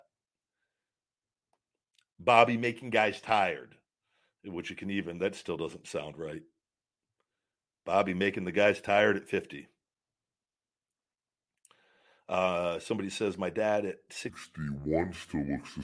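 Speech runs at its natural pace until just after "dad at", when from 14.30 s to the end at 15.83 s a wrong sample rate takes over. The sound slows to about 0.69 times its speed and drops roughly 6.5 semitones, low and dragging, which fits 32 kHz material played back at 22 kHz without conversion. On a spectrogram, harmonics and formants slide down and the upper band empties. The waveform's cycles and syllables stretch about 1.45 times longer.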